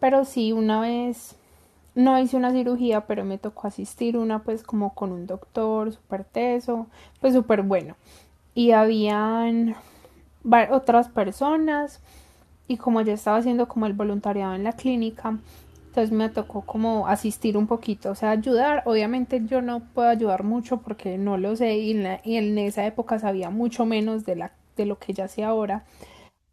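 No technical faults are present anywhere in the recording; the signal path carries the speech without any audible disturbance.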